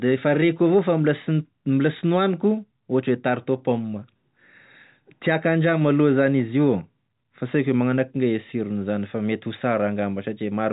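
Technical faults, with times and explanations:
The speech carries the narrow band of a fixed-line telephone path, with nothing above about 4 kHz and only a faint level-following hiss, which fits ordinary 64 kbps G.711 mu-law coding working as intended.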